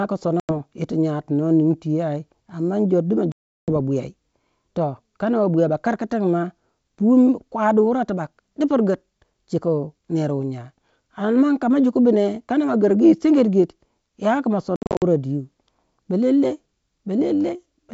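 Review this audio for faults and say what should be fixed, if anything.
Packet loss on an ADPCM call: lost packets become hard silent gaps at 0.40–0.50 s, at 3.32–3.70 s after "du ma", and at 14.76–15.03 s after "ya ki", where 200 ms of losses are scattered in runs of up to 60 ms. Each time, the decoder's predictor and step size drift from the sender's, so the speech returns slightly distorted before settling. Adding jitter buffering with loss concealment and resetting the decoder state after a gap would prevent this.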